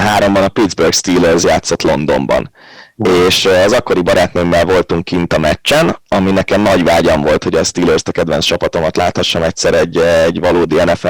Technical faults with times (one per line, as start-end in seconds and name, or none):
0.00-11.09 hard clipping